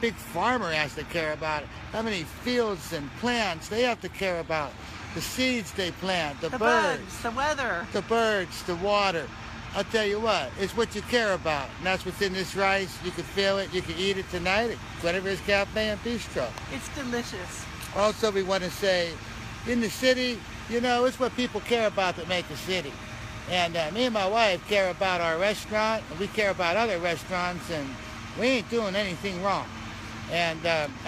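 No technical fault can be heard anywhere in the audio; the signal holds steady and continuous throughout without any break or disturbance.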